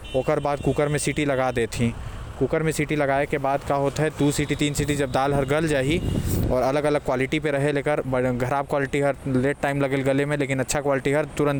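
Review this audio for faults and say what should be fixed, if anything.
From 3.20 to 3.77 s the speech turns grainy, and the gaps between syllables fill with a gritty noise floor instead of falling quiet. The likely cause is a stuck bit: one data bit held at a fixed value, so roughly half the samples are pushed off by a step of about -50 dBFS, following the waveform. Because that bit also flips with the sign of small values, quiet passages pick up noise. To prevent it, check the converter and its data lines, and re-seat or replace whatever link carried the audio during that stretch.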